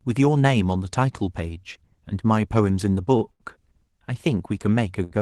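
At 3.17 to 3.23 s, a short stall from a late packet holds the speech for about 36 ms. A packet arrived late and the jitter buffer ran dry. The receiver stretched the last sound until it came. A second stall follows at 3.31 to 3.42 s, lasting 88 ms. A third comes at 5.04 to 5.13 s, lasting 69 ms. Nothing is lost. Each sound simply lingers too long, with a faint buzz or dip.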